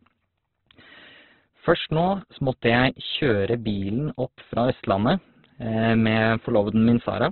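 Throughout, the speech sounds rough and grainy, with nothing above 4.4 kHz. Likely cause: heavy Opus compression, noise-filling starved bands at a very low bitrate.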